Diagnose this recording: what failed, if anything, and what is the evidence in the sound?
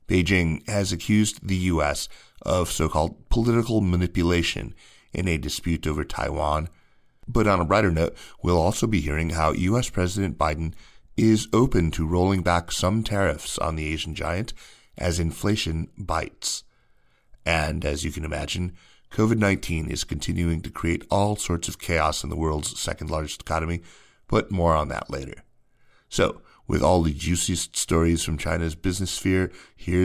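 Nothing audible in the speech points to a failure at any stage of the chain, from capture through to playback.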